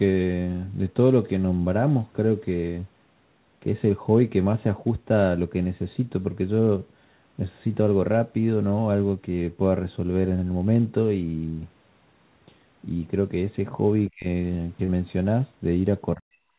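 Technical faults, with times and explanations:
14.09–14.26 s and 16.16–16.51 s, speech suppressed in double talk: the voice sinks by around 35 dB, then around 40 dB, and partly drops out, likely because the echo canceller could not tell the local talker from the echo of overlapping far-end talk. The waveform shows pinched envelope gaps, and the spectrogram shows dark vertical bands across all frequencies.
14.84–14.91 s, short concealed packet loss: about 40 ms of audio went missing, and 37 ms of it was filled by stretching the preceding sound, giving a brief smeared wobble. On a spectrogram, the filled stretch blends back into the real audio, with no visible gap in the waveform.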